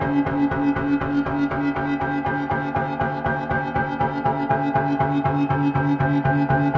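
Sounds play throughout at a wrong sample rate, running twice as fast and a full octave high, which fits 8 kHz material played back at 16 kHz without conversion.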